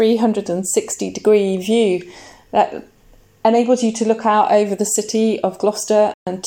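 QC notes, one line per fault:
6.14–6.27 s, Bluetooth dropout: the sound cuts to silence for about 128 ms, then resumes further along, as if it had kept playing through the gap. This is likely audio packets arriving too late over the wireless link and being discarded, which fits about six lost packets.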